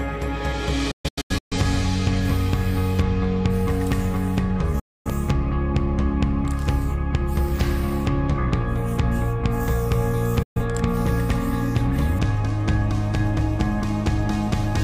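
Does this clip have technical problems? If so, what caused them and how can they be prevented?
Yes. A digital broadcast dropout occurs three times. The receiver lost clean frames and muted, so the sound fades to silence within 8 ms at 0.91 to 1.57 s (several short holes, the longest 128 ms), 4.79 to 5.11 s and 10.42 to 10.61 s. What was broadcast during those gaps is gone. A stronger, better-aimed antenna or more reception margin would prevent it.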